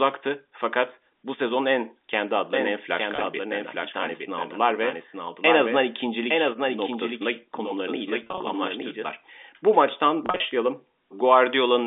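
Just after "bu sezon en kendi", at 2.53 s, a doubled audio track appears: a second full-band copy of the speech enters abruptly about a second behind the original and a few dB quieter, with no decay or room colour, and it cuts off just as abruptly at 9.07 s. This is likely an edit or capture path holding two copies out of step. The lagging copy overlaps the live speech.

Packet loss with pitch repetition occurs three times. From 3.16 to 3.24 s, 40 ms is lost in runs of up to 20 ms, each bridged by repeating the last pitch period, so the sound briefly holds with a slight buzz. From 8.24 to 8.40 s, 110 ms is lost with runs up to 30 ms. From 10.26 to 10.40 s, 110 ms is lost with runs up to 40 ms. In these two later bursts, the repeated cycles start to fade before the speech cross-fades back in, and all of it sits within the 250 Hz to 3.6 kHz telephone band of the G.711 A-law line.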